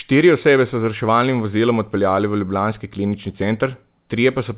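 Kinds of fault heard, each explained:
No faults are heard; the speech comes through a telephone-grade call path whose G.711 A-law coding leaves nothing above 4 kHz, giving the narrowband sound expected of that codec.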